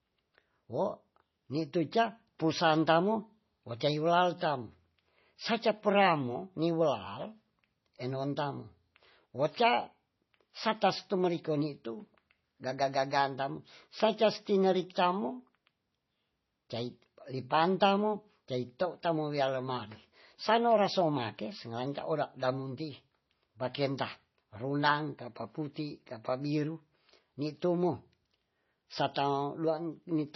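From start to finish the speech carries heavy damage that sounds like MP3 compression. Nothing comes through above 6 kHz, so the top end is simply gone and everything sounds dull and boxed in. Underneath, there's a watery, swirly texture as quieter detail flickers in and out from one frame to the next. That's likely an encoder starved of bits, which fits a low bitrate somewhere around 24 kbps, forced to drop the treble and discard weak parts of the signal.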